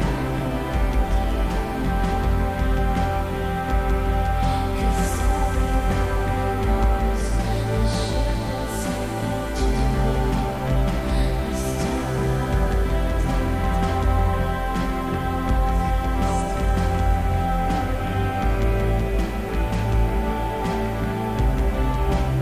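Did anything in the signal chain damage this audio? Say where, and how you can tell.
Yes. Low bit depth without dither runs through the whole clip: grainy distortion that follows the sound and worsens as it gets quieter, sitting roughly 30 dB below the signal. The likely cause is a sample-format conversion truncating to about 6 bits without dither.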